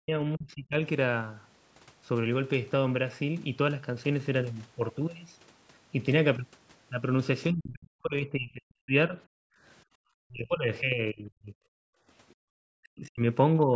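Speech recorded through a call's microphone chain, band-limited with nothing above 8 kHz, shows repeated level collapses typical of an echo canceller under load. The talker's voice dips at 0.0 to 0.76 s, 7.5 to 9.18 s, 10.26 to 11.53 s, 12.8 to 13.26 s and 13.64 to 13.75 s, most deeply by about 40 dB, with the last event only about 10 dB. This is likely speech suppressed in double talk: with both ends active, the canceller cannot tell local speech from loudspeaker echo and attenuates the whole microphone signal. The longest affected stretch, around 7.5 to 9.2 s, loses well over a second of speech. Between those events, the background gated by the echo canceller is heard as the room tone disappearing at 9.46 to 9.98 s, about 37 dB down, and at 11.81 to 12.52 s, about 40 dB down. Each dip lasts a few hundred milliseconds and then recovers, the pattern of a suppressor clamping the microphone while far-end audio plays and releasing when it stops. 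Within the second gap, at 12.29 to 12.34 s, a faint scrap of the other side's voice leaking through can be heard, roughly 40 dB below the talker. At that level it is a brief residual burst rather than a clear second voice, consistent with echo the canceller did not fully remove.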